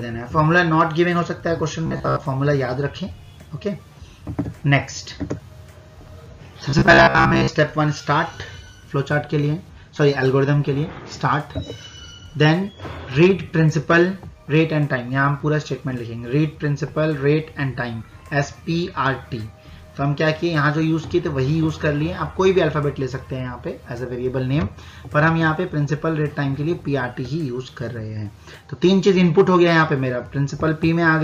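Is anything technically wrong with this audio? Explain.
Yes. From 1.87 to 2.25 s and again from 6.70 to 7.48 s, the sound turns into a rigid, metallic buzz at about 67 Hz, a robotic sound from repeated short buffers. The likely cause is late-arriving audio, with a roughly 15 ms fragment looped over most of each stretch.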